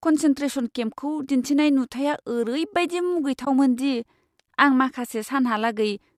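At 3.45 to 3.47 s, just after "केम्पखौ दिन्थिनाय नुथाइया ओरैबादि", there is AAC frame loss with muting. About 20 ms of speech drops to silence, which fits two short frames. The decoder zeroed them. Overlapping windows fade it out and back. The speech likely passed through low-delay AAC compression.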